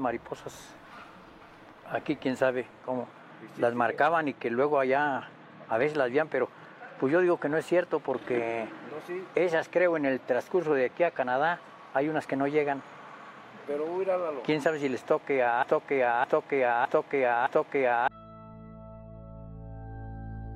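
From 15.63 to 18.08 s there's a broken-record loop: a 0.61 s fragment plays four times back to back, likely a stalled player resending its last buffer.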